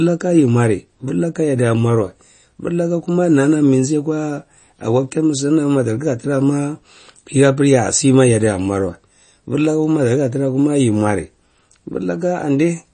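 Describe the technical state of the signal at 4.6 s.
At 4.6 s, as throughout the clip, the speech carries MP3 compression damage, likely from an encoder starved of bits, which fits a bitrate around 32 kbps. Nothing survives above 9.3 kHz, and weak frequency lines flicker between frames, giving a plainly audible watery, swirly texture with smeared attacks.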